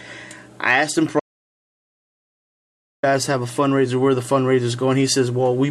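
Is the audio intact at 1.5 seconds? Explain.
No. At 1.5 seconds the clip is inside an audio dropout to silence running from 1.20 to 3.03 s. The sound cuts off abruptly and about 1.83 s of silence follows, with no room tone. The input was likely lost while the recorder kept writing silence.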